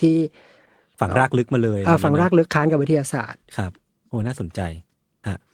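At 4.15 s the speech turns briefly rough and grainy, lasting until 4.29 s. This is a lost packet rebuilt from error correction. Packets went missing, but each following packet carried a low-bitrate copy of the lost audio. The decoder played those copies instead of leaving a hole. So there is no gap or dropout, just a coarser, noisier stretch. About 80 ms was rebuilt, which fits four 20 ms packets.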